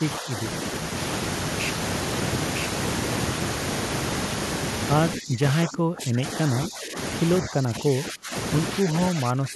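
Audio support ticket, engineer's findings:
Speech suppressed in double talk at 0.20–0.37, 5.18–5.42, 5.64–6.51, 6.67–6.97, 7.42–8.34, 8.81–8.94 and 9.11 s to the end. Level dips from about 5 dB to about 25 dB. Waveform shows pinched envelope notches; spectrogram shows faded bands. Likely echo canceller ducking the near end while the far end talks.

Doubled audio track, 0.96–4.94 s. A second full-band copy runs about a second behind, roughly equal in level, with no decay or room colour, and it starts and stops abruptly. Spectrogram shows repeated harmonic patterns offset in time; waveform shows overlapping envelopes. Likely a second capture path or a misaligned edit.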